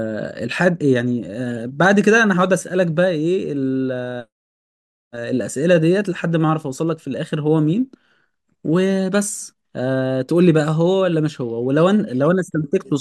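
No technical faults can be heard anywhere in this speech clip.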